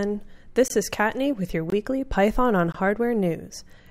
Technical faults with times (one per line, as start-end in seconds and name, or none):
0.68-0.70 gap between chunks
1.70-1.72 gap between chunks
2.72-2.74 gap between chunks